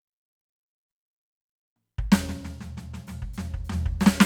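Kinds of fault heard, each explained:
No audible faults in this music.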